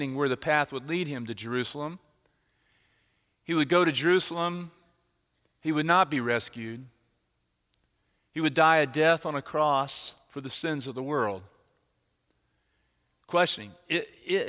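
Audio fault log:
Nothing to log here; the speech comes across with no audible technical faults at any point.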